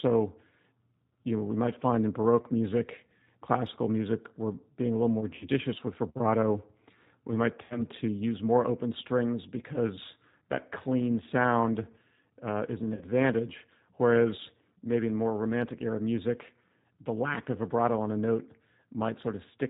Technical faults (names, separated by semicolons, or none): channel delay (comb filtering); G.729 codec; VoIP packet loss concealed by the speech codec